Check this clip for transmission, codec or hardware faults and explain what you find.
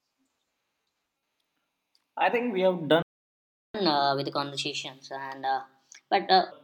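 There are two linked faults here, a playback stall followed by a catch-up. Both sit right after "I think we have."

Playback stall: at 3.02 s the speech cuts to silence for about 0.72 s, resuming at 3.75 s. The player likely ran dry of buffered data or had its thread blocked, so output simply stopped until it recovered.

Catch-up at higher speed: from 3.75 s to 6.52 s the speech runs at 1.25 times normal speed, pitched up roughly four semitones, so it sounds rushed and chipmunky. The player is resampling its backlog faster to win back the lost time, then settles.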